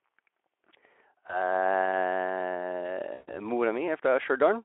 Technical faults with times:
1.27-1.44 VoIP packet loss concealed by the speech codec
3.13-3.38 VoIP packet loss concealed by the speech codec

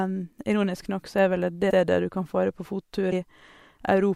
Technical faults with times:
1.69 compressed frames skipped
3.11 compressed frames skipped

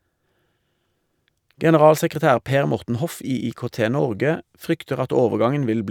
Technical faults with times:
none

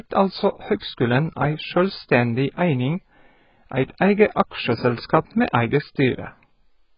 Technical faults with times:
0.00-6.97 AAC compression
0.79-0.82 pre-echo

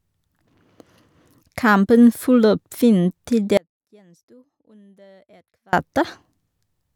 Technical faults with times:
3.57-5.73 audio dropout to a faint residue

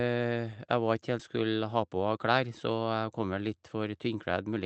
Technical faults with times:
1.19-1.21 skip ahead
1.77-2.30 jitter buffer speed-up

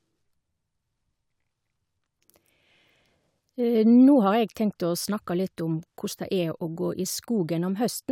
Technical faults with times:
none

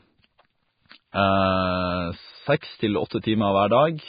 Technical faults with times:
0.00-4.09 Vorbis compression
1.12 pre-echo

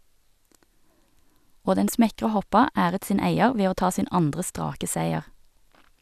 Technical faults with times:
none

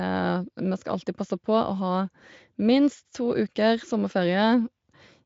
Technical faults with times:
none

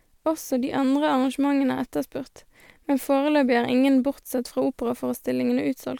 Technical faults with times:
none

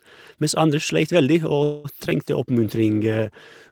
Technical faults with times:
1.63-1.86 call audio freeze
2.04-2.12 short concealed packet loss
2.35-3.72 call bitrate drop

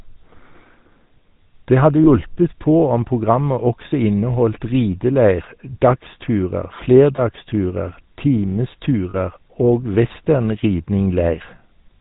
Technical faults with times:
0.00-12.00 GSM full-rate codec
2.04-2.07 lost GSM frames
7.16-7.19 lost GSM frames
9.10-9.16 lost GSM frames

